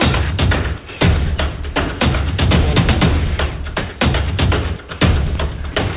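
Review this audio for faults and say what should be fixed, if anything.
At 5.72 to 5.75 s, about 30 ms of audio gives way to steady comfort noise. Roughly 20 ms of real sound is lost. This is likely sound dropped by the voice detector. It judged a quiet stretch as background and stopped sending. The receiver filled the gap with noise, which sits within the call audio's 4 kHz ceiling. Adding hangover time to the detector, or lowering its threshold, would keep quiet tails from being cut.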